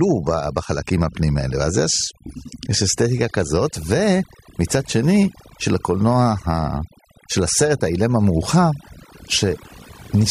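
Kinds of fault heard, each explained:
overdone noise removal: Throughout the whole clip, a noise reduction process set far too aggressively is at work on this speech. Wherever a frequency band sits close to what the tool judges to be noise, it is pulled down hard or shut off entirely, so the background collapses into near silence dotted with twinkling specks. Softer parts of the voice fall below that threshold too and get stripped away.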